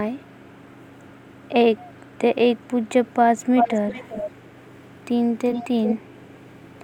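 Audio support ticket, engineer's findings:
Echo leak: the far end's echo canceller is likely letting loudspeaker pickup back into its microphone path. Faint delayed copies of the speech at about 421 ms, 0.26–0.81, 1.09–1.33 and 1.99–2.17 s. Much stronger at 386 ms, 3.57–5.05, 5.44–5.65 and 5.83–5.96 s. Faint again at 6.15–6.66 s.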